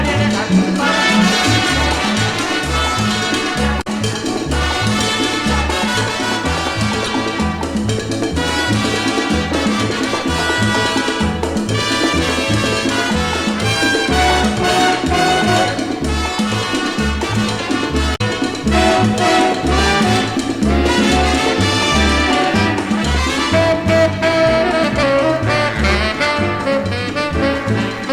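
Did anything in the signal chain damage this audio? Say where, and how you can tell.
Yes. Three short disruptions break through the sound at 3.78 to 3.87 s, 7.05 to 7.09 s and 18.12 to 18.21 s, each lasting roughly 30 to 100 milliseconds. That points to the codec stage: damaged data in a compressed stream. Corrupted or missing bytes made the decoder misread those frames, lose its sync and hunt for the next valid frame header, producing garbage output until it locked on again.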